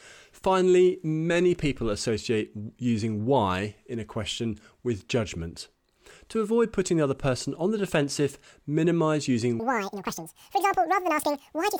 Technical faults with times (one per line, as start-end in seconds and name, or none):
9.60-11.79 section at the wrong speed